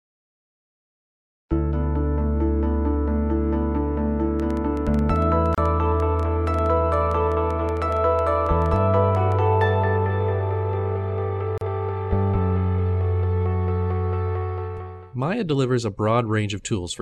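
A train of clicks runs from 4.40 to 9.33 s: roughly forty similar pops at an irregular pace of about 7 per second, peaking near the level of the surrounding sound. This is likely interference or a faulty connection or power supply.

A gap at a join of encoded pieces opens at 5.55–5.58 s (32 ms) and at 11.58–11.61 s (34 ms), six seconds apart. Separately encoded pieces were joined with their start delay and end padding left in, so the sound briefly drops out and then resumes.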